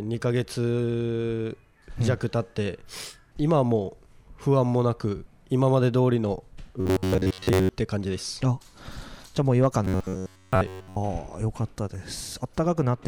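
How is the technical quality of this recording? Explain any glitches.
Two glitches stand out, both robotic sound from repeated short buffers. From 6.81 to 7.70 s and 9.85 to 10.96 s, a rigid metallic buzz near 94 Hz is imposed. The likely cause is about 11 ms of audio being looped while most of the real signal is skipped.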